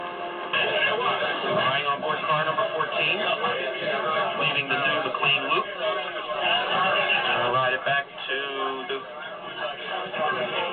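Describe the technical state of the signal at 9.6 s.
At 9.6 s the signal is intact, with no dropout, distortion, glitch or other technical fault to be heard.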